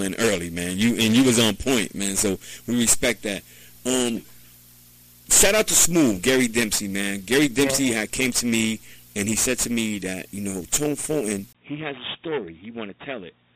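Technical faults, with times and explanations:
11.53–13.56 s, input switched to a poorer device: after a brief 20 ms gap the sound turns dull and noticeably quieter, with nothing above 3.8 kHz and faint new background noise, likely from a narrower-band microphone taking over.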